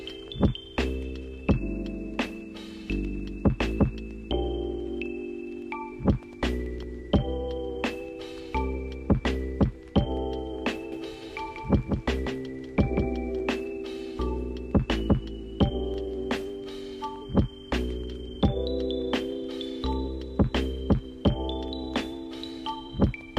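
From 10.92 s to 13.40 s, a doubled audio track appears. A second full-band copy of the sound runs about a fifth of a second behind the original. It sits a few decibels lower, around 5 dB down. The copy is dry, with no decay or room colour, so it sounds like a hard slapback rather than an echo. It cuts in and out abruptly. The likely cause is the same signal reaching the mix twice through a slower second path.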